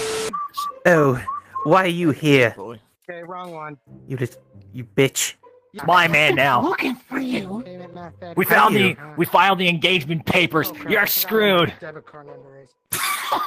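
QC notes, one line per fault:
9.83–13.47 s, call bitrate drop: the bandwidth estimate collapsed and the encoder was ordered down from 32 kbps to 18 kbps, staying at that floor for the final 3.6 s without recovering. With barely half its former bit budget, Opus quantises the spectrum far more coarsely and sheds upper frequencies, so the sound turns grainy and watery, loses its top-end air and comes across muffled right through to the end.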